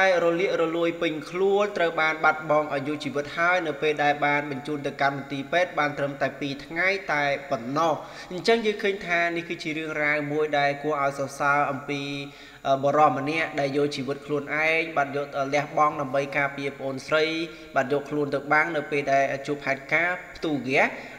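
No technical faults can be heard in this audio.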